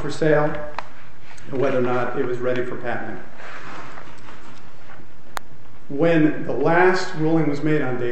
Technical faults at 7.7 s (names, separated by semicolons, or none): none